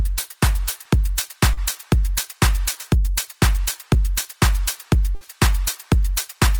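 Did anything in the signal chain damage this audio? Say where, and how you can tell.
Yes. The network stage damaged it, with two dropouts the receiver had to conceal. At 1.53 to 1.59 s there is short concealed packet loss. About 40 ms of audio never arrived in time. The decoder extended the preceding sound for roughly 35 ms and then blended back into real audio. It shows up as a brief smear or wobble rather than a clean gap, and whatever fell in that window is lost.

At 5.15 to 5.23 s a burst of packet loss is heard. This time about 60 ms went missing in one run. The receiver held the last sound for roughly 58 ms and faded it as the gap lengthened. A voiced sound there turns into a held buzz, while anything unvoiced becomes a dying hiss. The audio then picks up further along, skipping the stretch in between.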